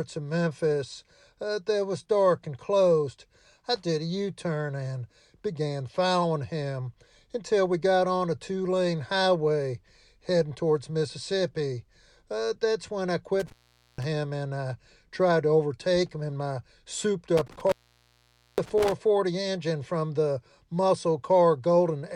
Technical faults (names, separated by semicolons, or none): intermittent contact